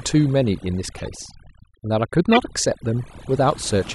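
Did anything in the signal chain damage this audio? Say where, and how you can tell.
Yes. Overdone noise removal runs through the whole clip, at the call-processing stage. The background sinks to near silence with twinkly specks. Bands near the noise estimate are getting pushed right down, and the quieter speech detail goes with them.

There are also two runs of corrupt frames played out by the codec stage. One runs from 0.98 to 1.08 s, spanning a few frames. The other, louder, runs from 2.32 to 2.38 s, peaking around -10 dBFS. Flipped bits put energy at the wrong frequencies for just those frames.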